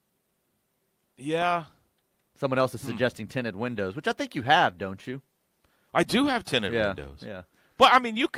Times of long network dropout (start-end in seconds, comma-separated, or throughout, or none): none